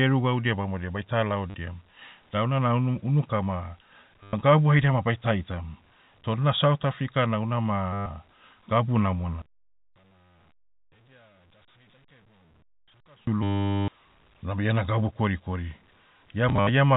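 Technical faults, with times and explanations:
1.5, 4.23 to 4.33, 7.93 to 8.06, 13.43 to 13.88 and 16.49 to 16.69 s: packet loss with last packet repeated. Audio stopped arriving and the receiver filled each gap by replaying its last packet. The gaps last 40, 100, 130, 450 and 120 ms, with the last one scattered over 200 ms and a longest run of 70 ms. The loops buzz at about 100 Hz, which fits 10 ms packets. The worst is the long robotic stutter just before "unabe iena gabu". Others fall just before "gabu haida ma baita" and just after "na south africa na".
9.42 to 13.27 s: one channel inverted. The voice abruptly drops by about 35 dB to a faint trace, then returns. The likely cause is reversed polarity on one stereo channel, so that the centred speech shared by both channels cancels when they are summed to mono. Only the small difference between the channels survives, which is why the voice nearly vanishes for that stretch.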